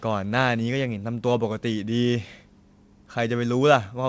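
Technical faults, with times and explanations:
The speech arrives over a wideband call path with nothing above 8 kHz, a limit that points to a G.722-style codec at about 64 kbit/s, and no fault can be heard in the signal.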